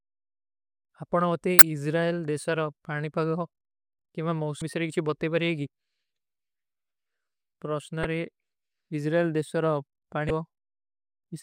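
Short glitches break into the speech at 1.59 to 1.62 s, 4.59 to 4.62 s, 8.03 s and 10.27 to 10.30 s, each a brief glitch of about 30 ms or less. These are damaged data in a compressed stream: corrupted bytes at those points make the decoder misread the affected frames and lose sync until it locks onto the next valid frame header. The garbled output from that stretch comes out as a blip.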